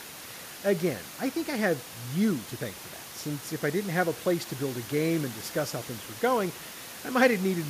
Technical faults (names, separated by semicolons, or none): none